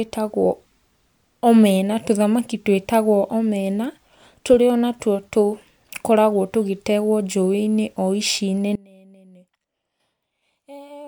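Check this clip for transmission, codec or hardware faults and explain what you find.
One fault is present: an audio dropout to a faint residue. At 8.76 s, right after "o ici", the speech abruptly collapses to a faint leak about 25 dB down until the end, likely a signal break with the downstream path still live.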